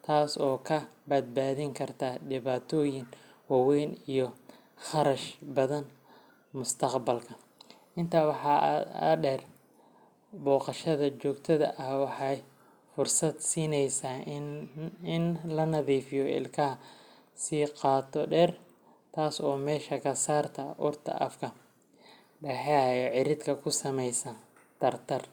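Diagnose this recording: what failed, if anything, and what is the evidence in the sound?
Nothing in this speech recording points to a failure at any stage, so there's no fault to diagnose here.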